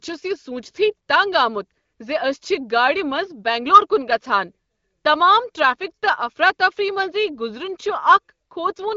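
Nothing here counts as a technical fault: it's a speech recording carried over an AMR wideband (HD Voice) link, with a light codec character that fits a rate of around 15.85 kbit/s and nothing above 7.3 kHz, all as you'd expect from that kind of call.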